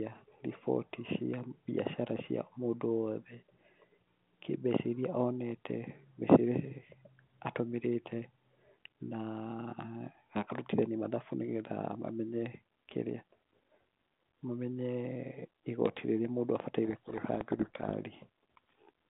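A telephone-band speech recording, carried as G.726 at 32 kbit/s over a 150 Hz to 3.6 kHz line, is buried under harsh, grinding distortion from 16.85 to 17.93 s. This is a codec payload misread: the decoder reads the G.726 code words with their bits in the wrong order.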